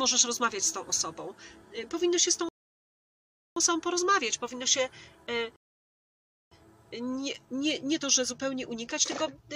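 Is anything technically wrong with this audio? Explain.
Yes, there are two rebuffering stalls, at 2.49 to 3.56 s and 5.56 to 6.51 s. Both times the player ran dry of downloaded audio and waited for more, so the sound drops to silence for about 1.1 s and then 0.95 s, then picks up exactly where it left off. Nothing goes missing; it just adds dead time.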